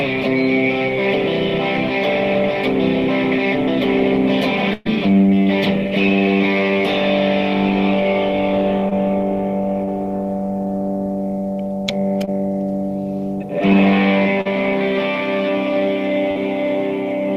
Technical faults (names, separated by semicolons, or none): burst of packet loss; short concealed packet loss